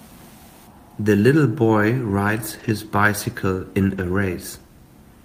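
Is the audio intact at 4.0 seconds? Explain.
No, right after "bicycle in", from 3.97 to 4.03 s, the speech turns briefly rough and noisy without a gap: a lost packet rebuilt from error correction, about 40 ms filled from low-bitrate backup copies in following packets.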